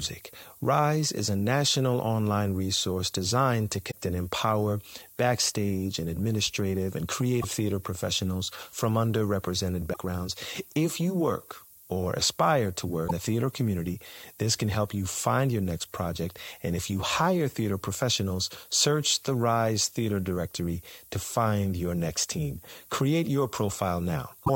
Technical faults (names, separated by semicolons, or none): low bit depth with noise shaping; damaged data in a compressed stream